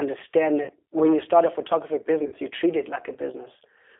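A speech clip that's been through the G.729 codec end to end. It sounds squeezed into roughly a 300 Hz to 3.5 kHz phone band, with that slightly rough, synthetic edge you get when an 8 kbit/s coder rebuilds the voice from a vocal tract filter, pitch predictor and a few pulses per frame. There are also two spots of VoIP packet loss concealed by the speech codec. At 0.64 to 0.71 s, just before "when you start a", about 40 ms of audio drops out, which fits two lost packets. The decoder stretches its last pitch and filter into a sound that fades, and the voice stays weak or distorted as it recovers. The second spot, from 2.26 to 2.34 s between "you start a photography" and "you treat it", covers about 60 ms, likely three packets, and has the same stretched, fading concealment and sluggish recovery.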